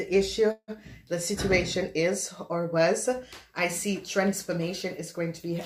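At 0.51 s the sound stalls for about 0.2 s, until 0.71 s. A call audio freeze: the last sound is stretched into a buzzy tone that decays, ending in roughly 60 ms of near silence. Then the audio resumes exactly where it stopped, nothing skipped, just running about 164 ms later. The likely cause is delayed packets draining the jitter buffer. On a spectrogram, frozen horizontal bands fade to a blank strip; the waveform shows a shrinking envelope before the gap.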